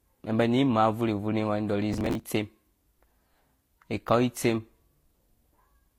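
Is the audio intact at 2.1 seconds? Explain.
No. From 1.93 to 2.24 s there is a burst of processor overload crackle. The processor could not fill its audio buffers in time, and roughly twenty deadlines were missed in a row. The sound fits buffers of about 5 ms each. Each missed buffer was skipped rather than replayed, so the sound jumps forward with hard edges and becomes a gritty, tearing crackle that stops once the load clears. A single dropout would leave one clean gap. Here the rapid string of tiny skips lasts about 0.3 s.

The whole clip, including this moment, also has a layered, smeary coarseness and nothing above 16.3 kHz. That points to transcoding between lossy codecs. The likely chain is HE-AAC at about 32 kbit/s followed by Vorbis at about 47 kbit/s. The second encoder spends bits re-coding the first one's artefacts and adds its own, so the two kinds of swirl are heard together. 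A single lossy encode would show only one kind.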